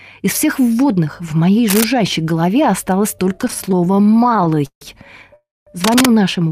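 A speech recording with three kinds of fault. Cable scratch noise appears at 1.68–1.84 s and again at 5.84–6.06 s: dense, uneven rustling bursts about as loud as the speech. It is a crackling texture rather than single clicks, likely from a worn cable or connector being moved. Repeated stalls (stutter) run from 3.35 to 4.83 s. About thirty short holds, the longest 154 ms, fill 459 ms in total, roughly a third of that span. The speech drags and stutters, but nothing is skipped. A call audio freeze occurs at 5.36–5.69 s. It is one 310 ms hold whose continued sound fades into 210 ms of silence, likely caused by delayed packets. The speech then resumes exactly where it stopped, so this is a single long gap rather than a run of brief stalls.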